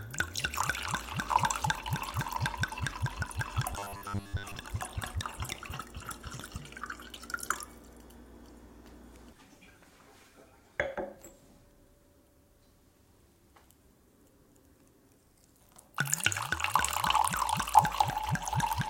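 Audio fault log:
3.74–4.55 s, robotic sound from repeated short buffers. The sound becomes a rigid metallic buzz at 100 Hz, from a 10 ms snippet repeating through most of the stretch. Fresh audio likely arrived too seldom, so playback looped while real audio was skipped.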